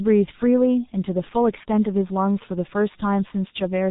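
Throughout, the speech carries heavy G.723.1 codec damage: nothing above 3.8 kHz survives, leaving it muffled and hoarse with smeared consonants, consistent with roughly 6.3 kbit/s coding.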